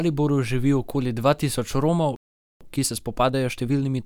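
At 2.16 s the speech cuts out in mid-flow and the output stays silent until 2.61 s, a gap of about 445 ms. This playback stall is most likely the player running short of buffered data or having its audio thread blocked, so nothing reached the output until it recovered. The sound then picks up again after the gap.

From 2.61 s to the end of the clip, the speech runs at roughly 1.15 times normal speed while keeping its original pitch. This is time-compressed catch-up: having fallen behind during the stall, the player trims its backlog by removing short segments and cross-fading across the joins. The result is speech that sounds hurried but not raised in pitch.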